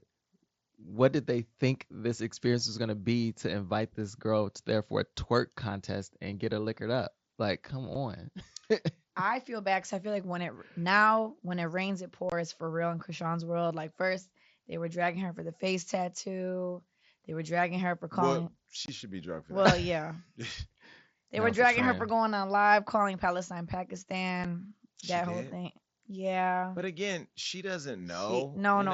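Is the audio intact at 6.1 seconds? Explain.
Yes, the speech at 6.1 seconds is intact, with nothing beyond the ordinary character of the Bluetooth mSBC headset link it passes through.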